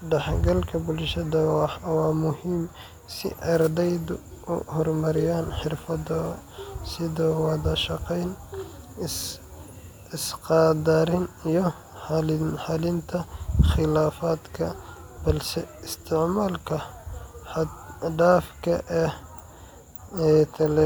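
No technical faults can be heard anywhere in the recording.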